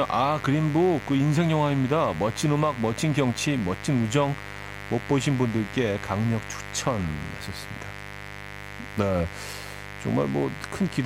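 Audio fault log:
Throughout: mains buzz. A steady, raspy buzz sits roughly 15 dB below the speech. Sharp switching spikes from the 50 Hz supply leak in twice per cycle, 100 times a second. Their 50 Hz harmonics reach several kHz, hence the rasp.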